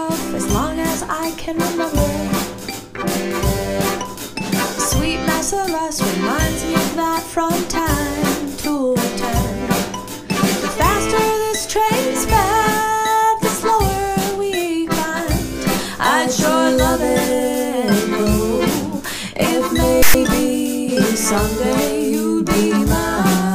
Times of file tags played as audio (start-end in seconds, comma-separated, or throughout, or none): 20.02-20.15